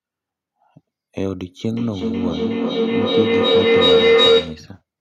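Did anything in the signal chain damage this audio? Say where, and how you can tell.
Yes. A feedback howl forms in the call path from 1.71 s to 4.74 s, peaking about 10 dB above the speech. It narrows to a tone around 500 Hz and pulses at roughly 0.4 s intervals, matching the delay of an acoustic loop. Two devices sharing a room on the same call feed each other's loudspeaker output back into their microphones. Each pass adds gain, so the loop's preferred frequency builds until the loop is broken.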